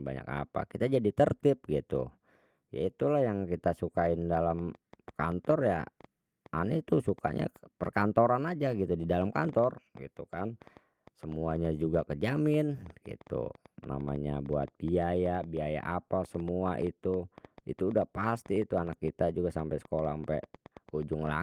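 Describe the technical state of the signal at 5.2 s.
At 5.2 s the speech is overlaid with ticking and popping, about 6 clicks per second at an uneven pace, peaking at roughly the level of the speech itself. This train of clicks begins at 4.35 s, just after "itulah yang kita sukain", and continues to the end of the clip. Its cause is likely interference from nearby equipment or a faulty connection or power supply.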